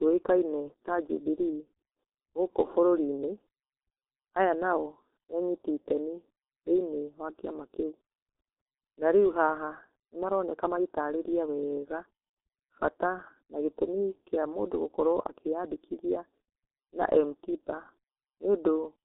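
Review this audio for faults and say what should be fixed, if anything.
The whole clip carries heavy G.723.1 codec damage. Nothing passes above 3.9 kHz. Slow, coarse frame coding leaves speech muffled and hoarse, fitting roughly 6.3 kbit/s. Route the call through a wideband, higher-bitrate codec instead of G.723.1.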